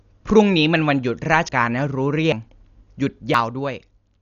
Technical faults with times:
0.00-4.22 Dolby Digital compression
1.49 dropped buffer (overrun)
2.32 dropped buffer (overrun)
3.34 dropped buffer (overrun)

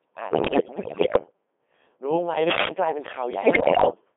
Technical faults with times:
0.00-4.16 Codec 2 vocoder
0.30-1.32 bit errors on digital voice radio
3.33-4.01 bit errors on digital voice radio

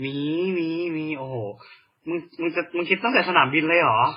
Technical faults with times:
0.00-4.17 transcoding between lossy codecs

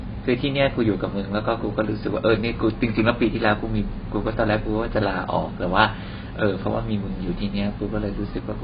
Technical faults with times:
0.00-8.63 AAC compression

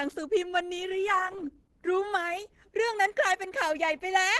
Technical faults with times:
0.00-4.39 Opus compression

